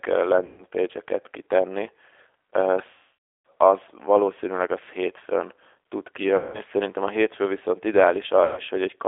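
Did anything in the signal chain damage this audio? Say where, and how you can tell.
Yes, at two stages. The codec shows throughout: the audio sits in a narrow line band of about 300 Hz to 3.5 kHz, and the speech has a plainly audible rough, synthetic quality. That points to G.729, here the G.729A variant at what sounds like 8 kbit/s. It rebuilds each frame from a vocal tract filter, a pitch predictor and a few pulses. A simple telephone band filter would sound dull but natural. This sounds dull and also artificial, which marks it as a parametric speech codec.

The network stage adds VoIP packet loss concealed by the speech codec, at 0.46–0.64 s, 2.91–3.47 s (just before "az valószínűleg az hétfőn"), 6.36–6.61 s (between "valószínűleg az hétfőn tud" and "szerintem a hétfő viszont") and 8.45–8.61 s. The missing stretches run about 120, 540, 180 and 120 ms. A hard dropout would leave silence or a click. 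Instead the decoder repeats its last pitch and filter, so each gap fills with a stretched, buzzy tone or a coloured noise that fades. The speech after each gap stays weak for a moment while the decoder's state recovers.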